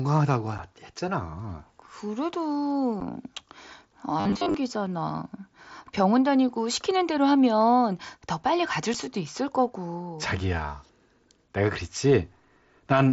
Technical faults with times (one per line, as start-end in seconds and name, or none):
0.58 unconcealed Bluetooth headset packet loss
3.00 unconcealed Bluetooth headset packet loss
4.20-4.54 robotic sound from repeated short buffers
8.94 unconcealed Bluetooth headset packet loss